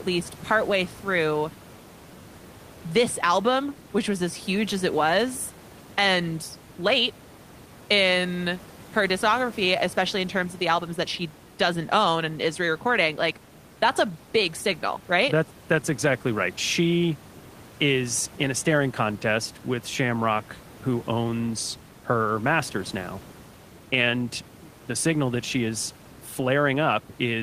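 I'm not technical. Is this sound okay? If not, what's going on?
Yes, nothing is wrong with the recording; the faint background noise is simply the room the microphone was in, sitting well below the speech.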